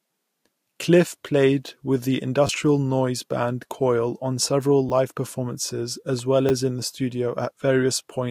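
At 2.47 s, after "played with the" and before "noise band", there is a repeated buffer. New audio did not arrive in time, so the device played its last 10 ms piece again, twice more, with a hard join at each repeat. The repeats run to 2.49 s. Around 20 ms of real audio is lost. With a buffer this short, the repeat sounds like a click or a brief buzz rather than a clear stutter.

The same fault returns at 4.89 s, after "on several" and before "live performances". This time the 10 ms piece plays once more. About 10 ms is lost.

At 6.19 s comes an electrical switching spike. It is a sharp snap or a tight cluster of clicks laid on top of the speech. The likely cause is a nearby switch, motor or static discharge arcing into the audio line.

A third repeated buffer follows at 6.49 s, just before "in the". Again one extra play of the 10 ms buffer drops around 10 ms.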